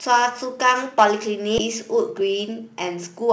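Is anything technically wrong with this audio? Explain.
Yes. There are three faults in this speech clip.

From 0.99 to 1.04 s there is microphone overload. The peaks are flattened at the converter's ceiling, with the input driven about 5 dB past full scale and roughly 7% of samples clipped. The loudest syllable takes on a harsh, crackling edge. The likely cause is microphone input gain set too high.

At 1.58 to 1.60 s the audio skips ahead. Roughly 0.7 s of sound is missing, and nothing fills the space. The two sides are butted together almost directly, so the speech jumps abruptly mid-flow, as when queued audio is discarded to catch up.

From 1.94 to 3.22 s a jitter buffer speed-up plays the speech at about 105% of normal rate while the pitch stays unchanged. The receiver repeatedly cut out short pitch-period segments, about 70 ms in total, to shrink excess buffered delay. The delivery sounds slightly rushed.

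The G.722 call path at 64 kbps leaves nothing above 8 kHz.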